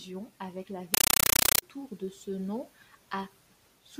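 Compressed stream played as audio, from 0.94 to 1.62 s: an undecoded AC-3 bitstream, consistent with a rate of about 384 kbps, is output as raw samples. Each frame becomes an 8 ms noise burst followed by silence, repeating 31.25 times a second, so the speech gives way to loud, chattering static.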